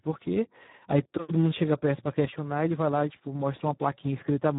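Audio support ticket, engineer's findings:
Speech hoarse, noisy and edging on robotic for the whole clip; nothing above 3.8 kHz. Speex codec at a low quality setting, consistent with roughly 8 kbps: too few bits for the CELP excitation, so the voice turns noisy and hoarse.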